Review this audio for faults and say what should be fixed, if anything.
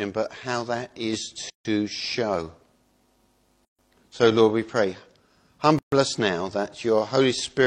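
Separately encoded pieces were joined without trimming each run's start-up delay and last-frame padding, leaving a gap at a join of encoded pieces at 1.50–1.65 s (151 ms), 3.65–3.79 s and 5.79–5.92 s (136 ms each), one join every 2 s. Each gap drops out with smeared edges, then the sound resumes where it stopped. To prevent it, encode the material as one continuous stream, or trim the encoder delay and padding using gapless metadata before joining.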